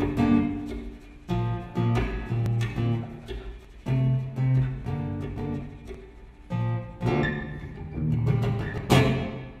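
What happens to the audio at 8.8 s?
At 8.78 s the audio jumps ahead, skipping about 50 ms with no gap of silence. This is likely a dropped buffer (overrun), where samples were overwritten before being read and the two sides spliced directly. The waveform shows an abrupt discontinuity, and the spectrogram a thin vertical broadband line.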